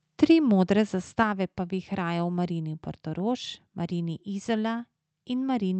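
A speech recording with microphone overload at 1.20 to 1.22 s. A loud peak pushes about 1 dB past the converter's limit, and its tops flatten into a brief harsh crackle. On the waveform a small fraction of samples sit squared off at a flat level, and the spectrogram shows a thin vertical smear of broadband energy. The likely cause is an input volume set too high for the converter. Right after, at 1.23 s, the microphone volume is stepped down. The voice and the background both drop by about 4 dB at once, as if the call software lowered the device's input gain in one move after seeing the clipping. The waveform envelope shows a sudden step to a lower level, and the spectrogram darkens evenly across all frequencies from that point.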